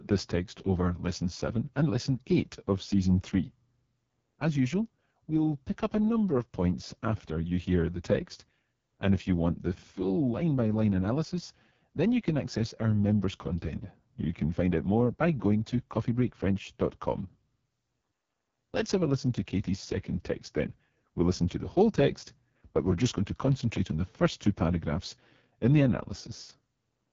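From start to finish the speech carries AMR wideband (HD Voice) codec damage at 6.6 kbit/s, its lowest rate. The coarse pulse-excitation model makes voices rough and raspy, and no content exists above about 7.2 kHz, with the top band filled by synthetic noise.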